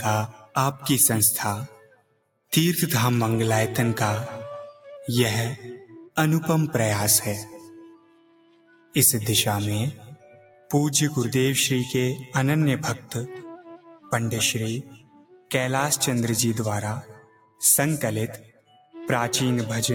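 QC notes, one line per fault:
throughout, noise suppressor applied to music or sounds: a speech-tuned suppressor reads steady tones and tails as noise, so level swings around 15 dB; the waveform envelope pumps and sustained spectrogram bands flicker.
0.28–2.52 s, 4.73–5.08 s, 7.84–8.95 s, 9.94–10.7 s, 13.45–15.51 s, 17.02–18.95 s, sound cut by the noise suppressor: held or decaying sound sinks by about 10 to 18 dB while attacks pass. Tails collapse early in the waveform, and spectrogram energy thins abruptly.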